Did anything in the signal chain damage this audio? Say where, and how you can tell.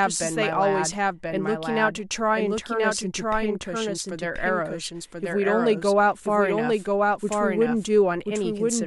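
Yes. The speech carries a doubled audio track from start to finish, most likely because the signal reached the mix twice, once directly and once through a slower capture path or a misaligned edit holding a second copy. A full-band repeat trails the original by roughly one second, at about the same loudness. It has no reverberant tail or room colour, so it sounds like a second, late copy of the speech rather than an echo.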